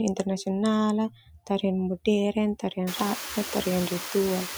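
Across the whole clip, a noise suppressor processes the background lightly, taking it down by only about 1 dB, so its artifacts stay faint. From 1.1 to 1.63 s, the suppressor misreads speech as noise and turns it down by up to about 17 dB for roughly a third of a second, so parts of the speech sound swallowed. After the room noise rises by about 25 dB near 3 s, the suppressor cuts speech again from 3.29 to 3.66 s, dipping it about 12 dB for a brief stretch and leaving a faint patch.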